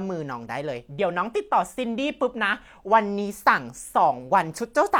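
A short speech recording with no technical faults to report: the signal comes through intact, with no audible damage at any point.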